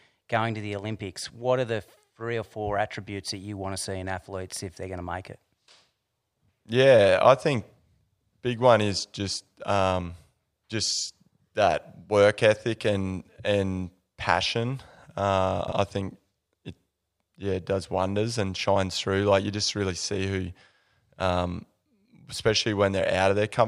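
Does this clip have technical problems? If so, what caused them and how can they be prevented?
Yes. From 15.6 to 15.72 s, just before "I think it", the speech has chunks out of order. A 40 ms chunk plays two chunks late, causing a brief jumble at three hard joins. Unlike a dropout, nothing is missing; it is only reordered. Prevent it by reassembling chunks by sequence number before playback or writing.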